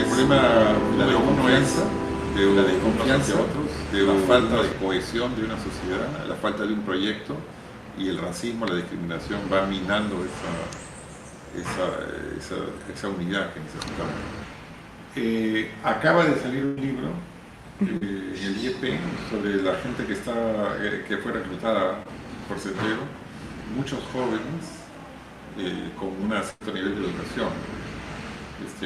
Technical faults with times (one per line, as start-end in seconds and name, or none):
0.00-4.72 doubled audio track
16.65-16.79 burst of packet loss
17.97-18.03 short concealed packet loss
22.03-22.07 short concealed packet loss
26.51-26.62 burst of packet loss